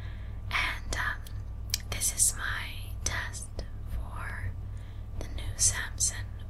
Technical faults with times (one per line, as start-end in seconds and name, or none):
4.30-4.32 loud pop